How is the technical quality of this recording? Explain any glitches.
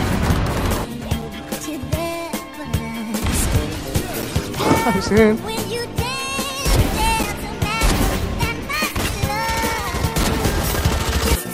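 The recording has one recurring glitch: a gap between chunks at 1.22, 4.22, 7.23 and 10.24 s. The audio arrives in 3.0 s chunks, and each join leaves about 6.5 ms of silence. Nothing is lost, but the sound breaks off with hard edges in brief, evenly spaced dropouts.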